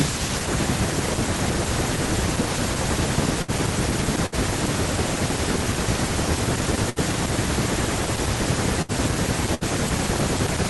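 Bursts of packet loss at 3.42–3.51 s and 4.26–4.35 s: about 60 ms of speech went missing each time, and the receiver stretched the last sound and faded it out. At 6.27 s a jump in the sound marks a dropped buffer (overrun), likely the hardware overwriting a few milliseconds of unread samples. It shows as a waveform step with no gap. Further packet-loss bursts follow at 6.90–6.99 s, 8.82–8.92 s and 9.55–9.64 s. On the spectrogram each appears as a smeared, decaying patch with no silence.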